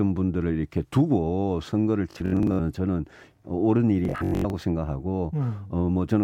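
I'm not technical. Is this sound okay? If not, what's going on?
No, there's Bluetooth stutter at 2.11 to 2.59 s and 4.05 to 4.53 s: data dropped out, so tiny slices of speech repeat, then it jumps ahead.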